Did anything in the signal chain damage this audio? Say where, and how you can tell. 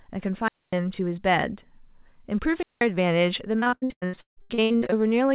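Yes. At the wireless radio link, twice, hiss swells briefly and then the sound drops into near silence before returning: from 0.43 to 0.75 s with a mute of about 245 ms, and from 2.52 to 2.85 s with a mute of about 185 ms. That is a wireless microphone squelch dropout. The FM signal faded far enough that the receiver's squelch shut the output until the carrier recovered.

Further down the chain, on the network side of the call path, the speech turns choppy and robotic from 3.6 to 4.94 s. There are 18 holes, the longest 157 ms, and about two thirds of that stretch is made up of stretched copies of the preceding sound. This is repeated packet loss. Packets kept arriving late or not at all, and the jitter buffer patched each gap by extending the last audio before the next gap hit. The G.711 codec's cut-off above 4 kHz is just the narrowband call path working as designed.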